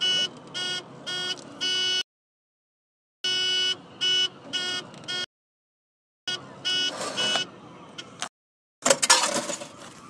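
Rebuffering stalls cut the sound to silence at 2.01–3.24 s, 5.24–6.28 s and 8.28–8.82 s. Each time the player ran dry of downloaded audio and waited. Playback then picks up exactly where it stopped. Nothing is skipped. Each gap just adds time: about 1.2, 1.0 and 0.5 s.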